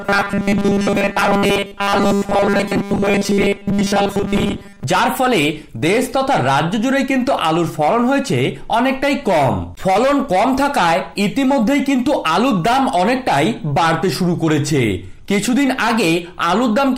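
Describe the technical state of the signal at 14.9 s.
At 14.9 s the signal is intact, with no audible technical fault at that point.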